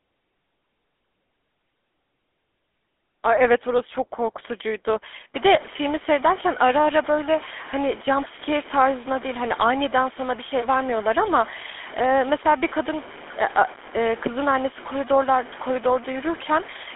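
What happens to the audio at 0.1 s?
At 0.1 s the speech already carries GSM full-rate codec damage, which runs through the whole clip. A vocal-tract model driven by sparse regular pulses gives a plainly audible buzzy, gravelly roughness, consistent with 13 kbps full rate, unlike clean band-limiting, which only dulls. The sound sits within about 250 Hz to 3.5 kHz, with nothing above 3.8 kHz.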